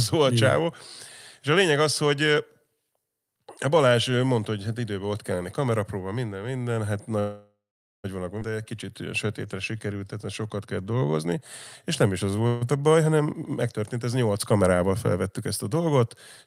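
Speech with a call audio freeze from 7.19 to 8.06 s: the last sound stretches into a fading fill and then about 0.46 s of silence, an 0.85 s gap, likely from delayed packets emptying the jitter buffer. Nothing is lost, unlike the skip ahead. A shorter 0.14 s freeze at 12.47 to 12.63 s fades without going silent. At 8.40 s playback skips ahead, dropping roughly half a second, with a brief 12 ms join instead of a held gap. Jitter buffer slow-downs follow at 8.56 to 8.87 s and 9.27 to 11.36 s (91% speed) and 12.08 to 12.84 s (88%). Repeated pitch periods draw the sound out at unchanged pitch, unlike the freeze's sudden stall. A jitter buffer speed-up at 14.63 to 14.91 s runs at 112%, trimming roughly 40 ms in small pieces, so it sounds briefly hurried rather than cut like the skip.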